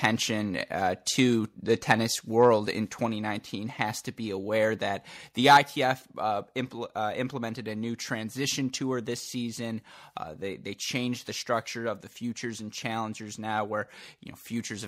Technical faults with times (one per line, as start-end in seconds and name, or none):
0.04 microphone overload
1.90-1.92 microphone overload
2.04 microphone volume stepped down
3.06 microphone volume stepped down
5.49-5.57 microphone overload
5.57 microphone volume stepped down